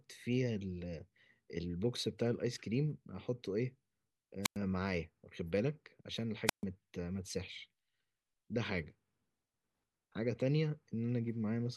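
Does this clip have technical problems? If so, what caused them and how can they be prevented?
Yes: two wireless microphone squelch dropouts, from 4.42 to 4.57 s and from 6.46 to 6.64 s, muting the speech for about 100 ms and 137 ms. The transmitter's radio signal faded until the receiver's squelch cut the output, so a short swell of hiss precedes each silent hole. That hiss separates it from a digital dropout, which cuts cleanly or glitches. Keeping a clear line of sight, shortening the distance, and using diversity receivers prevents it.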